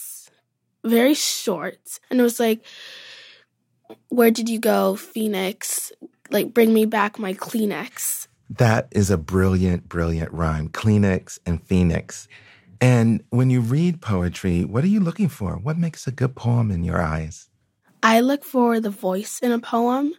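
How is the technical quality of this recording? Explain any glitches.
No glitches are audible anywhere in the recording; the speech signal is continuous and intact throughout.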